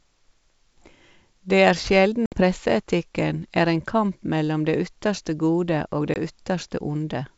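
Speech with packet loss on an ADPCM call: hard silent gaps at 2.26–2.43 s (60 ms lost) and 6.14–6.17 s (20 ms), each followed by slightly distorted speech while the decoder's predictor resynchronises.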